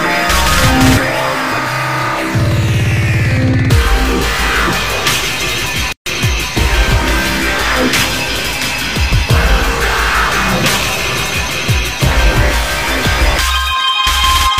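The audio has a gap at a join of encoded pieces from 5.93 to 6.06 s, a gap of about 138 ms cutting into otherwise continuous sound, after which it resumes exactly where it stopped. Separately encoded segments were butted together untrimmed, so one run's end padding and the next run's start-up delay both remain; the joins fall on a 10 s spacing. A waveform shows a notch with smeared edges; a spectrogram shows a vertical blank band across all frequencies.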